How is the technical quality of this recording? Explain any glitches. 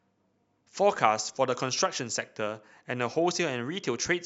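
Nothing in the recording stood out as a technical problem on listening.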